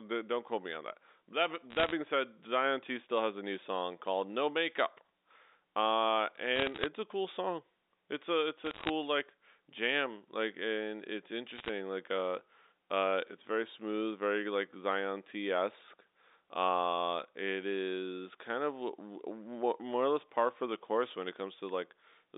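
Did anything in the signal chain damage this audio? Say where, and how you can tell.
Yes. Brief bursts of sharp ticking crackle over the speech at 1.70–1.92, 6.56–6.86, 8.65–8.90 and 11.56–11.69 s are bit errors on the digital phone line, where flipped bits corrupt individual G.711 samples.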